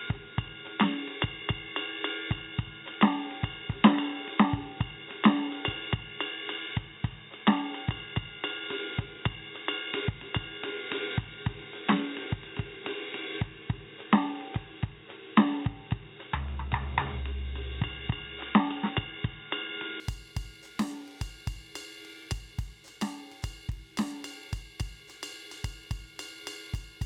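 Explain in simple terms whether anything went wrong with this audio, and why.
For the first 20 seconds, the music sounds dull and boxy. Nothing above about 3.8 kHz gets through, so the bright top is missing. There is also a faint new hiss under the music. At 20.0 s the sound suddenly opens up, with no gap, and the loudness changes a little. The likely cause is an input switched to a poorer device, such as a cheaper microphone or a headset, which carries a narrower range.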